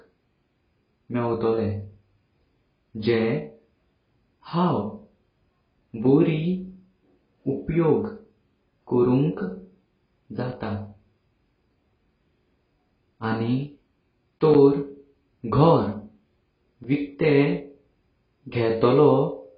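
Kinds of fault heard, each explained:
AAC compression: A low-bitrate AAC-LC encoder likely squeezed the audio hard, discarding everything above about 5.1 kHz and coarsely quantising what remained. The result is heavy, dull, smeared speech with a warbling, fizzy texture, which fits a bitrate near 16 kbps.
Block of digital silence: Short runs of samples became zeros. Hard cuts to silence and back cause tick-like dropouts at 10.52 s and 16.84 s (5.3 ms) and 14.54 s (10.7 ms), fitting 256- and 512-sample blocks.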